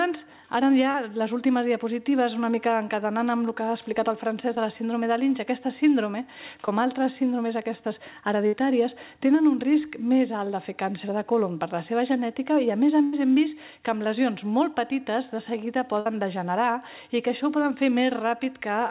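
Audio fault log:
0.91–0.95 s, 4.56 s and 6.66–6.68 s, short concealed packet loss: brief smears or wobbles where roughly 10 to 30 ms of audio never arrived in time. The receiver extended the preceding sound to bridge each hole, then blended back into the real signal.
8.47–8.54 s, 13.04–13.14 s and 16.00–16.06 s, burst of packet loss: a held buzz or fading hiss, then the sound resumes further on. About 50, 90 and 60 ms of audio went missing. The decoder stretched the last sound and faded it, so the missing stretch is simply absent.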